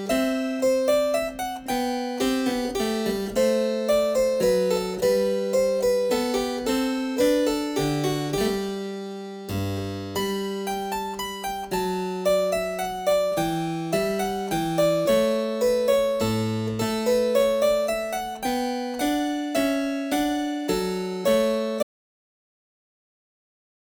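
The input most likely lost its connection near the end, through a disconnected device, a failed link or an accidental mute, while the recorder kept writing silence. This audio dropout to silence begins at 21.83 s and lasts to the end, about 2.1 s. The sound cuts off abruptly mid-flow and is replaced by silence with no room tone or background noise, so whatever followed that moment is missing.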